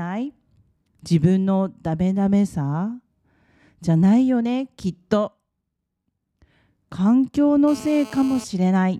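A nearby 2G handset sending data in bursts 217 times a second had its radio pulses rectified by the audio circuit, causing GSM phone buzz from 7.68 to 8.44 s: a hard, raspy 217 Hz buzz full of harmonics, about 20 dB below the speech.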